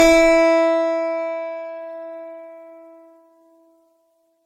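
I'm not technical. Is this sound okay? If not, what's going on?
No. Throughout, the music sounds swirly, hollow and smeared, with soft attacks. This is generation loss, likely from being compressed and re-saved roughly seven times.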